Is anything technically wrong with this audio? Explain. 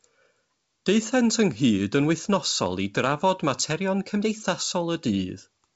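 No, the speech comes through a normally working G.722 wideband telephone path at 64 kbit/s, with the expected bandwidth of a wideband call up to about 7 kHz and nothing in the signal that stands out as a technical problem.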